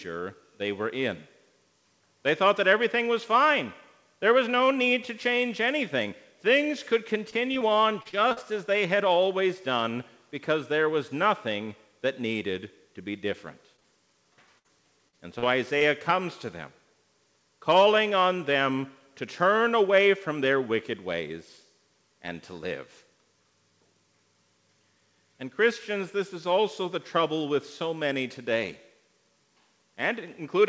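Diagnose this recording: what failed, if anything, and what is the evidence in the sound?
The network stage failed, causing repeated packet loss (robotic sound) in two stretches: 7.30 to 8.38 s and 14.59 to 15.83 s. Each stretch is choppy, with pieces missing. The first has holes up to 39 ms long, about 15% of it patched. The second has holes up to 56 ms, about 13% patched. Packets kept arriving late or not at all. The receiver bridged each hole by extending the last sound, and then the next hole arrived.

Short concealed packet loss also occurs, between 13.76 and 13.87 s, heard as a brief smear. Two losses overlap there. The first is a 13 ms fill near 13.76 s, which stretches timing slightly. The second is a 42 ms fill from 13.80 to 13.86 s. The decoder missed those frames. It synthesised a continuation from the preceding sound, then crossfaded back into the real signal. This is again a network fault, concealed at the decoder.

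The call codec itself, G.722, shows nothing above 8 kHz, running at 64 kbps.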